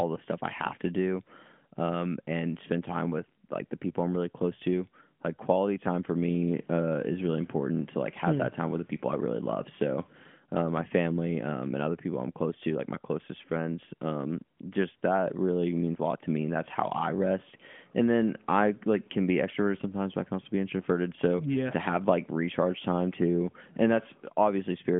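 AMR comfort noise cuts in at 14.58 s for 20 ms, and again from 14.96 to 15.02 s, just before "that really means a". The phone judged the sound silent and stopped sending speech frames. The receiver filled each gap with smooth synthetic noise, replacing the real background.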